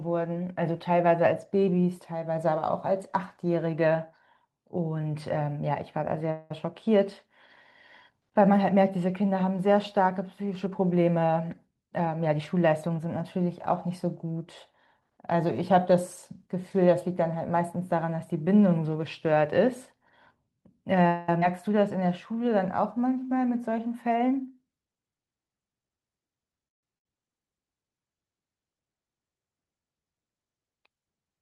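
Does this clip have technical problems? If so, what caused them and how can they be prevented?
Yes, there are several network-related faults here, clustered mostly in the second half.

Call audio freeze: At 6.31–6.51 s and again at 21.07–21.29 s, the sound stalls for about 0.2 s. The last bit of audio is stretched into a fading buzz or hiss, then picks up exactly where it left off, so nothing is lost, just delayed. At 26.68–26.84 s the stall is about 0.15 s of near silence. The likely cause is packets getting held up in transit until the jitter buffer ran dry. A steadier network path, or QoS prioritisation for voice traffic, would keep those packets flowing.

Jitter buffer speed-up: From 10.92 to 15.23 s the speech runs about 4% fast. From 23.87 to 25.52 s it's closer to 10% fast and noticeably hurried, while the pitch stays put. In each stretch the receiver trimmed roughly a fifth of a second of pitch periods to shed the extra delay that built up after the stalls. 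Cutting the delay spikes upstream, or letting the buffer drain more gently, would keep this from being audible.

Skip ahead: At 21.40–21.42 s, right after the second freeze, playback jumps forward with almost no gap. Around 150 ms of speech is simply gone, and the two sides are butted together. Late audio had piled up behind the stall, and a chunk was dropped rather than played late. A jitter buffer with more headroom, or one that time-compresses instead of discarding, would help.

Jitter buffer slow-down: Between 21.80 and 23.27 s the speech drags at about 93% speed, same pitch, with sounds slightly drawn out. The receiver repeated pitch periods to add about 0.11 s back into a buffer that had just been emptied and cut. Avoiding the preceding freeze-and-skip sequence is the real fix, since this is the buffer rebuilding its reserve.

Burst of packet loss: At 26.98–27.06 s, just after the third freeze, about 70 ms of audio is missing. 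The receiver bridges it by carrying the last sound forward and fading it, then resumes further on. A short run of consecutive packets was lost or arrived too late to play. Forward error correction or redundant audio encoding would cover a gap this size.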